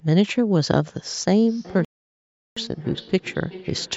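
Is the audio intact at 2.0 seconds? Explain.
No. At 2.0 s the sound has dropped out entirely: a playback stall silences the output from 1.85 s to 2.57 s, a gap of about 0.72 s, before the audio resumes. A break this long, cutting off the sound mid-flow, likely means the player ran short of data or its output thread was held up, so nothing reached the speaker until it caught up.

The moment also falls inside a feedback echo between two devices, which runs from 1.48 s to the end of the clip. Around the gap, the speech comes back as thinner, ringing repeats, roughly every 0.4 s, peaking at about 19 dB below the direct speech. A second device in the same room is playing the call's audio aloud, and the first microphone picks it up again. That microphone's echo canceller only removes its own device's output, so the sound loops back.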